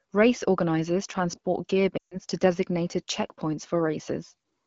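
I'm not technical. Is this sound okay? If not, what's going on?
No. From 1.98 to 2.17 s, right after "organizers transport gear", the speech quickly fades and drops to near silence, then returns a little rough at "to designated checkpoints". These are lost AMR speech frames: phone-radio errors wiped out about 140 ms of speech, and the phone padded the gap by stretching the last good sound.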